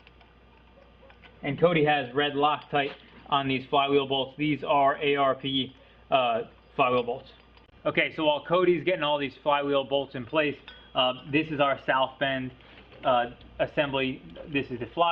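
Nothing here stands out as a technical problem; the sound simply runs along without any glitch, dropout or odd artefact catching the ear.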